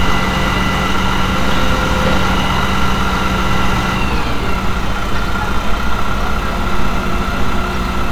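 Nothing stood out on listening to this recording of everyday sounds.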